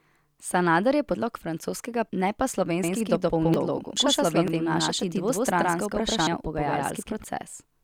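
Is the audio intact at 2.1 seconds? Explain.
No. At 2.09 s the speech lurches forward, landing on "ne pa". These are compressed frames skipped: about ten frames of roughly 85 ms each were never decoded, dropping around a second of audio.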